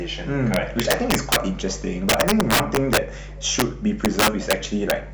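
A steady low 50 Hz tone with some low harmonics sits under the speech for the whole clip, about 15 dB below it. This is mains hum, where a ground loop or nearby transformer leaks the power line into the signal path.

Violent cracks break out on loud passages from 0.54 to 1.36 s, 2.09 to 2.97 s, 3.59 to 3.62 s, 4.05 to 4.53 s, and once at 4.90 s. This is integer overflow. Peaks pushed about 2 to 12 dB past the largest representable value wrap to the opposite sign instead of being limited, which is far harsher than clipping.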